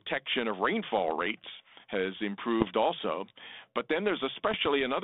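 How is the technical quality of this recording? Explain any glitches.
The recording has three short bursts of damage from bit errors on an ADPCM link, heard over telephone-band audio of about 250 Hz to 3.6 kHz whose light coding texture fits G.726 ADPCM at 32 kbit/s.

The bursts fall at 0.99 to 1.11 s, just before "rates has"; 2.60 to 2.69 s, just after "rates has"; and 4.45 to 4.67 s. Flipped bits, a fraction of a percent, throw off the decoder's step size and predictor, so each burst leaves pops, rough grit and brief level jumps that ring on for a few milliseconds.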